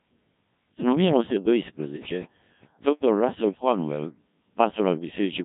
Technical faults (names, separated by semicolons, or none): Codec 2 vocoder; train of clicks